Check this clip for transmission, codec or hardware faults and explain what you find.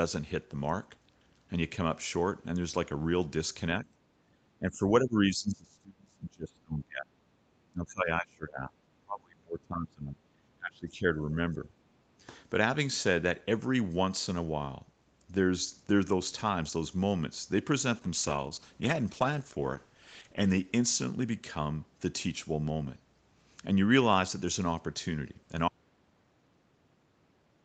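The clip is speech, and it has four kinds of fault.

From 3.85 to 4.31 s the room sound dips by about 10 dB. This is background gated by the echo canceller. It clamped the microphone while the loudspeaker played. The background falls away briefly, then returns when the canceller releases.

The talker's speech dips at 4.59 to 7.14 s, 7.71 to 8.77 s, 9.04 to 11.04 s and 11.23 to 11.68 s. The deepest cuts are around 30 dB, and the last is slight. This is likely speech suppressed in double talk, where the echo canceller mistook the talker for echo.

From 17.96 to 21.91 s there is a call bitrate drop. The Opus encoder falls from 32 to 10 kbps and stays at the low rate for about 2.5 s. Coarser coding makes the speech rough and watery. The top end dulls below the normal 8 kHz band.

At 25.68 s the audio cuts to complete silence, and it stays silent to the end. No room tone remains. This is an audio dropout to silence, likely a lost input or link while recording continued.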